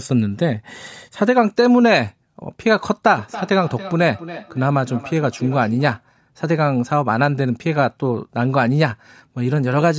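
Speech clip with a feedback echo between two devices from 3.16 to 6.06 s: the speech comes back roughly every 300 ms, peaking about 16 dB below the talker. Two devices share the call in one room, each mic re-catching the other's playback, which neither echo canceller removes. The call mic processing tops out at 8 kHz.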